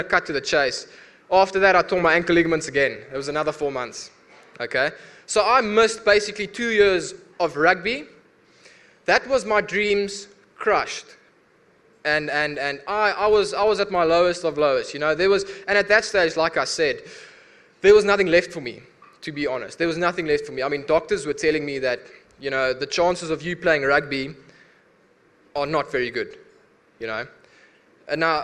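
Running right through the audio there's a low, steady buzz at about 46.9 Hz, a rapid ticking that gets louder and softer along with the sound itself. That's the signature of a filter restarted on every block: it drops its memory at each block boundary and starts again from silence, so every block opens with a tiny transient. Ticks at that rate fit a 1024-sample block.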